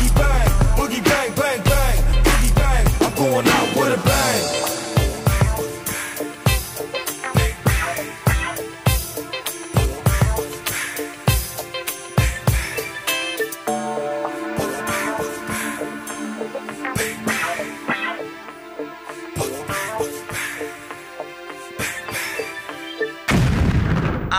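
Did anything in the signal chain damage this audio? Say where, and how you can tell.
Yes, at the driver or buffer stage: at 11.26 s and 18.43 s, new audio missed its deadline and the device replayed its last buffer, a repeated buffer fault. A 5 ms slice sounds three times with hard joins, heard as a brief click-like buzz.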